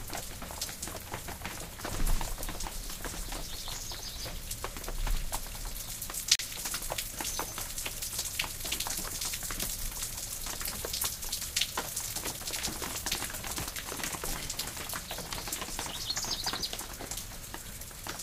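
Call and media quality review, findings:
Gap between stream segments: hard-edged silent holes at 6.35–6.39 s (about 39 ms) and 12.39 s (about 6 ms), 6 s apart, matching segment boundaries. Segment timestamps don't abut, so the player pads with silence and no audio is lost. Waveform shows a flat near-silent block; spectrogram shows a blank vertical stripe.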